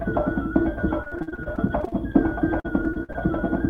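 Repeated packet loss (robotic sound) runs from 1.03 to 2.16 s and again from 2.60 to 3.16 s. Packets kept arriving late or not at all, and each hole was bridged by extending the preceding sound, with the next dropout coming soon after. About a quarter of each stretch is patched this way, in gaps of up to roughly 50 ms, so the audio turns choppy, with fragments audibly missing.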